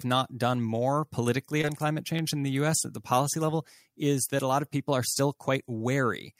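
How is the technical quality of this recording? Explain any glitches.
The recording has two audible glitches, one from network loss and one from chunked processing.

Short concealed packet loss occurs from 1.61 to 1.65 s, between "not done more politically" and "on climate". About 20 ms of audio never reached the decoder in time. The receiver patched the gap with 18 ms of synthetic sound, extending what came just before, then blended back into the real signal. The result is a brief smear or wobble at that point.

Overlapping chunks cause a stutter at 2.19 s, after "more politically on climate" and before "in the". The audio was handled in 2.5 s chunks, and each chunk began slightly before the previous one ended. Here 12 ms of sound plays twice at the join. That repeated sliver is heard as a quick click or stutter.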